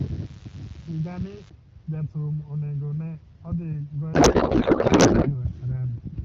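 From the start to 1.5 s there is mains buzz: sharp switching spikes from a dimmer, rectifier or unshielded run get into the signal twice per cycle of a 50 Hz supply, so the interference is a dense stack of 50 Hz harmonics reaching well into the kilohertz range. It sits roughly 25 dB below the speech and is heard as a steady, raspy buzz under the opening.

From 4.14 s to 5.34 s the speech gives way to a codec payload misread. The AMR-WB stream, whose light coding character is consistent with a rate around 12.65 kbit/s, appears to be packed octet-aligned but unpacked as bandwidth-efficient. The decoder therefore reads plausible frames with every field shifted. For that 1.2 s stretch the speech turns into garbled noise and warble that barely tracks it, until the framing lines up again.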